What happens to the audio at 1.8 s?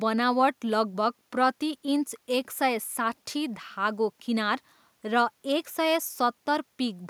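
Nothing goes wrong at 1.8 s; the speech there plays through intact, with no dropout, click or distortion at that moment.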